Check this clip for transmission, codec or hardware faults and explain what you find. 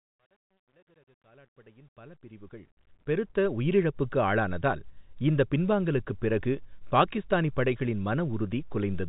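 One fault turns up, at the opening fade-in. From 0 to 3.67 s there is truncation distortion on the fade: the gain stage drops low-order bits without dither, which fits roughly a 10-bit path. Through about 0 to 2.56 s the quietest part of the rising speech turns gritty and stepped. It smooths out as the level climbs, under a telephone band that stops near 3.8 kHz.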